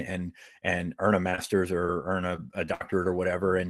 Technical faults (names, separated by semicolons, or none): short concealed packet loss; repeated packet loss (robotic sound)